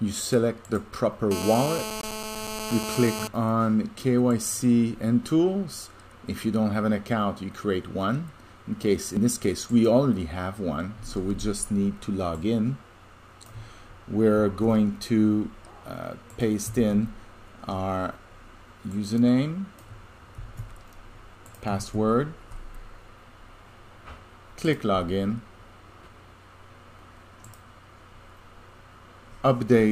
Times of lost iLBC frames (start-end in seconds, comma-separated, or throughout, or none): none